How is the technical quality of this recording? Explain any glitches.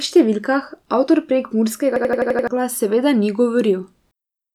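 There's one real glitch. From 1.96 to 2.48 s a system hang loop kicks in: the machine stalled while the audio hardware kept replaying its last buffer. You hear an 85 ms slice repeating six times at 11.7 Hz, a choppy machine-gun stutter that fits a 4096-sample buffer. Roughly half a second of speech is lost.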